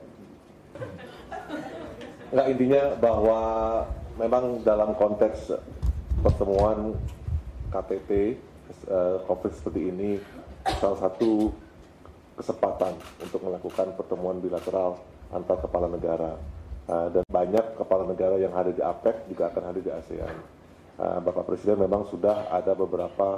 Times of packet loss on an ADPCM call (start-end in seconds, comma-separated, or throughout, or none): none